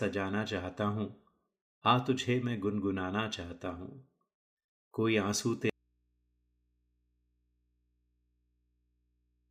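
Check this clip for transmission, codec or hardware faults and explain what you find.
One fault is present. Audio dropout to a faint residue from 5.70 s to the end: the speech cuts off abruptly, likely a lost feed on a still-live input, leaving only mains hum far below the speech level.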